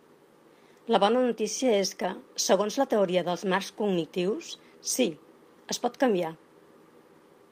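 At 2.01–2.07 s, after "bona notícia és", a lost packet rebuilt from error correction plays about 40 ms of rough, noisy speech from a low-bitrate copy, which fits two lost packets. No gap or smeared guess is heard before "segons la teoria dels".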